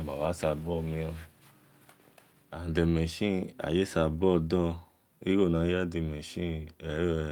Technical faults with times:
none

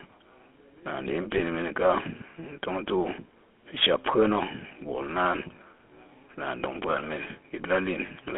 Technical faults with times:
0.00-8.38 GSM full-rate codec
1.38-1.41 lost GSM frames
4.68-4.71 lost GSM frames
8.06-8.09 lost GSM frames

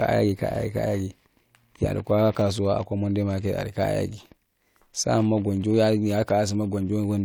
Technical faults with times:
none

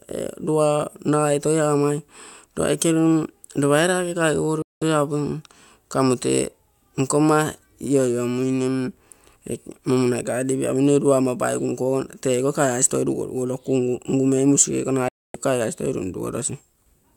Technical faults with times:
4.62-4.82 digital broadcast dropout
15.08-15.35 digital broadcast dropout

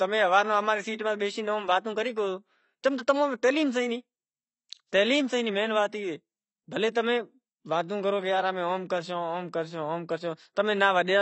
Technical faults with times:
0.00-11.22 AAC compression

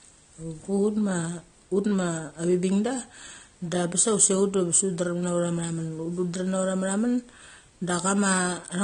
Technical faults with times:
0.00-8.84 AAC compression

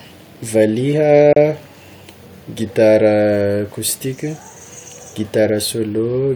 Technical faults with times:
1.33-1.36 gap at a join of encoded pieces

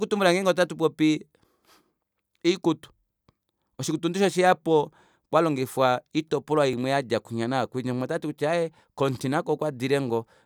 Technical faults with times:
6.73 repeated buffer

